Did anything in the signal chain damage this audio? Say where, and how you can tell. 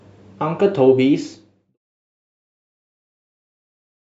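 No, nothing in the chain seems to have hurt this speech, and the only shaping you hear is a smooth, deliberate fade-out that begins at about a second in and finishes at 1.78 s, just as an editor would draw it.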